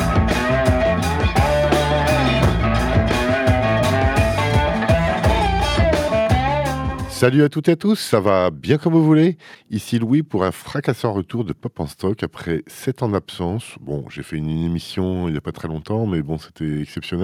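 No technical faults can be heard anywhere in this recording.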